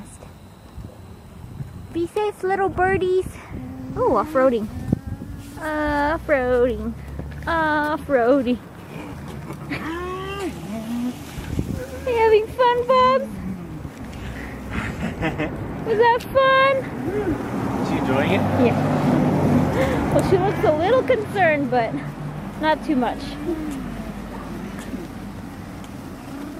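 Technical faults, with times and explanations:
0.00 to 18.62 s, USB whine: current drawn by the USB bus in 1 ms frames leaks into the audio through power or ground, leaving a fixed-pitch whine built on 1 kHz and its multiples, strongest near 15 kHz, sitting roughly 45 dB below the sound.
6.70 s, bit error spike: a single flipped bit in one sample makes the value jump by a power of two and return at once, heard as one sharp, broadband tick, unrelated to the surrounding audio, reaching about -21 dBFS.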